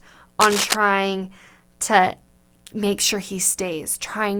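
From 0.40 to 0.76 s, cable scratch noise rasps over the speech at similar loudness, likely a worn connector moving; spectrograms show ragged broadband smears.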